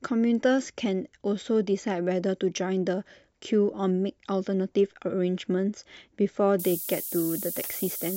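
Speech, with low bit depth with noise shaping from 6.59 s to the end at 8.17 s. Over that stretch the signal is carried on only 5 bits, and the rounding error is fed back so that it piles up in the upper frequencies. The result is a steady, thin hiss climbing sharply toward the top of the band, nearly as loud as the speech itself. Plain truncation to few bits would instead give a gritty, broadband distortion that follows the speech.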